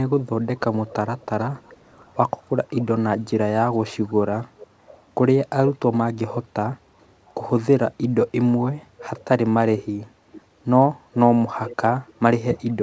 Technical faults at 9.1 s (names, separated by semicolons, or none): echo leak